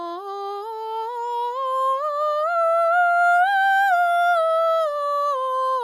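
Music, with no technical faults heard anywhere.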